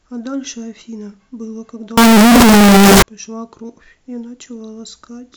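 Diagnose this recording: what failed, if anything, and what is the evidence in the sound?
Signed and unsigned mixed up, 1.97 to 3.02 s, in sample-format conversion. The speech turns into loud, harsh distortion, quiet moments as loud as the rest. Likely cause: 16-bit samples read with the wrong sign, flipping the top bit so each zero crossing jumps full range.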